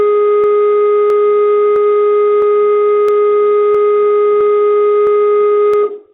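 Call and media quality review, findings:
Regular clicks through the music, 0.44 s to 5.74 s, every 0.66 s, ten or so; clock drift buffer slips, likely two unsynced clocks around 300 ppm apart, dropping or repeating a handful of samples each time.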